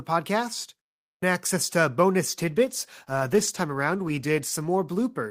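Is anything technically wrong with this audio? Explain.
Yes, there is a call bitrate drop starting at 2.4 s, just after "podcast access to bonus", and lasting to the end of the clip. The connection's bandwidth estimate fell, so the encoder was told to spend far fewer bits. The sound fits a drop from about 64 kbps to roughly 17 kbps, held at its lowest for about 2.2 s. With so few bits the speech is coded coarsely, and it turns rough and degraded and never recovers before the clip ends.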